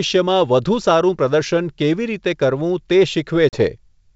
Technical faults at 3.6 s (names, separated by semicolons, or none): packet loss on an ADPCM call